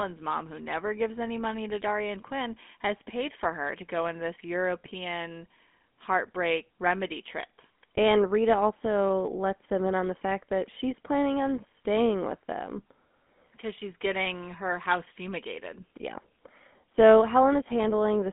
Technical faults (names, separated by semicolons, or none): GSM full-rate codec